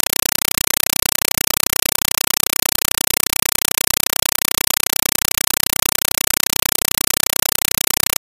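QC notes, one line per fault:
throughout: compressed stream played as audio. An undecoded AC-3 bitstream, consistent with 256 kbps, is read as ordinary samples, so loud chattering static replaces the speech. Waveform: 5.33 ms noise bursts repeating 31.25 times per second, with silent zero padding between. Spectrogram: evenly spaced broadband vertical stripes.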